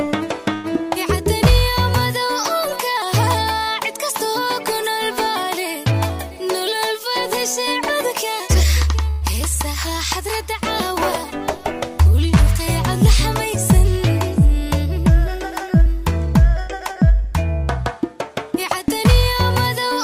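At 0.53 s there's a call audio freeze: the last sound is stretched into a short, fading buzz for about 106 ms before the audio carries on where it stopped. Nothing is lost, but everything after it arrives that much later. The likely cause is delayed packets draining the jitter buffer. From 5.92 to 7.10 s a jitter buffer speed-up trims tiny pitch-period slices so the audio runs at 105% speed with unchanged pitch, cutting roughly 70 ms of built-up delay. It sounds a touch hurried. At 9.10 s the same freeze happens again, about 111 ms of fill and no missing audio. Then from 15.50 to 17.32 s another 105% speed-up cuts around a tenth of a second.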